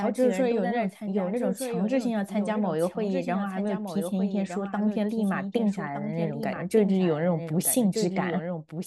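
Throughout, a doubled audio track: a full-band copy of the speech trails about a second behind, roughly 5 dB quieter, likely a second capture path; spectrograms show every pattern repeated, undecayed.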